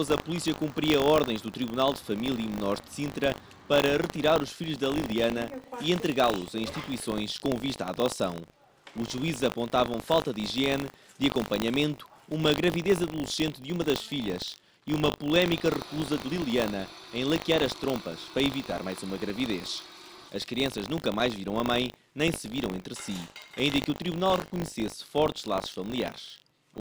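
Throughout, the writer and reader of the ring buffer cross each 20 ms period, splicing a small slice of audio from roughly 70 ms earlier: buffer tearing, heard as a 50 Hz rattle riding on the sound.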